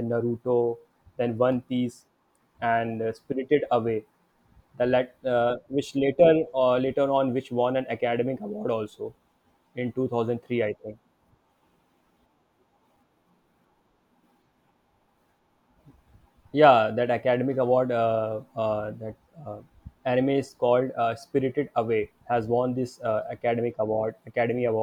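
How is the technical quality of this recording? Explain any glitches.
One glitch stands out: a CD skip at 12.97 s. The laser jumped to another turn of the disc's spiral, so the player muted for a few milliseconds and resumed elsewhere, heard as a tick followed by a jump in the speech. Unlike a plain dropout, the speech does not pick up where it stopped.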